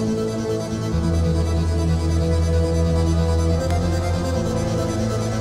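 At 3.71 s a single sharp snap cuts through the audio, lasting only about a millisecond and peaking at around -15 dBFS. This is an electrical switching spike, most likely a nearby switch, motor or static discharge arcing briefly and being picked up by the audio line. On a waveform it shows as one narrow needle. On a spectrogram it appears as a thin vertical stripe spanning the full frequency range.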